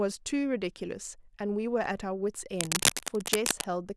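From 2.56 s to 3.64 s, cable scratch noise runs over the speech. Dense, uneven bursts of crackle and rustle sit at roughly the same loudness as the speech. The likely cause is a worn cable or connector being moved, its contact flickering.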